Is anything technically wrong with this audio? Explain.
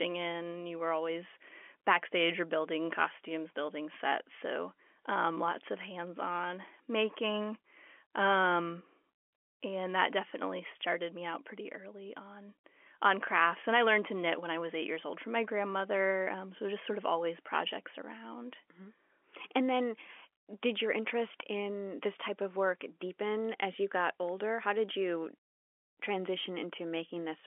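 No, nothing is technically wrong.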